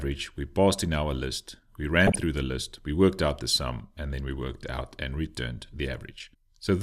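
A brief burst of noise blips rides over the audio from 2.07 to 2.17 s. This is DAB burbling: weak reception let bit errors of a few tenths of a percent slip past error correction, corrupting MP2 audio data across seven frames.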